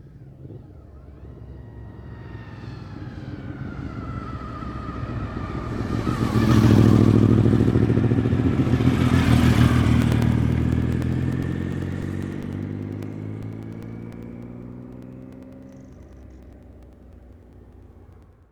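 A background task stalls the USB bus or audio driver every 0.1 s from 10.02 s to 18.43 s, causing periodic USB or driver dropouts. Each stall blanks roughly 2 ms with silence, about a hundred times, heard as a steady ten-per-second ticking wherever sound is present.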